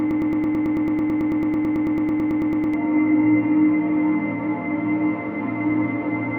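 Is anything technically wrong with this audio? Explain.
Yes. From the start until 2.74 s there is a broken-record loop: the player or stream likely stalled and kept resending its last buffered fragment, so a 110 ms slice of sound repeats exactly, back to back, as a rapid mechanical stutter, and whatever should have played there is lost.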